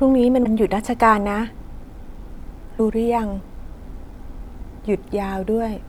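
At 0.43 to 0.46 s the speech jumps forward and the join comes out garbled for about 30 ms, rather than a clean splice. This is likely a broken MP3 bit reservoir: after a cut, the following frame reaches back into earlier frames for the data it stored there, finds bytes belonging to a different frame, and decodes them as nonsense until the stream resynchronises.

At 2.78 s there is a second jump ahead, heard as a quick smeared blip instead of a sharp click. This is compressed frames skipped: a handful of frames, about four, were dropped, taking roughly 100 ms of speech with them. The step size fits a frame length of 26.1 ms, and because adjacent frames overlap in the decoder, the edges blend into a soft smudge at the join.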